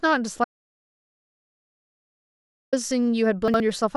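From 0.44 to 2.73 s the speech cuts to total silence for about 2.28 s, an audio dropout to silence, likely from a lost input. Unlike a natural pause, no room tone survives. Between 3.48 and 3.60 s, chunks out of order: a 60 ms chunk plays one chunk late, producing a brief jumbled moment where sound is reordered rather than missing.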